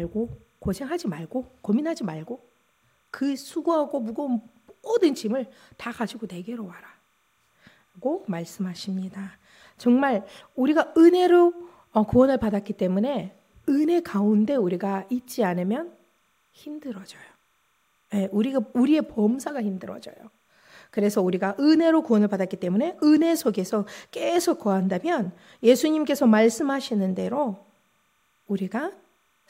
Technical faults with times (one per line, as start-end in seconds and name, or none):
0.00-29.50 timecode bleed